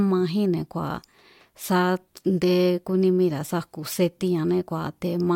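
Nothing stood out as a technical fault on listening to the speech in this recording.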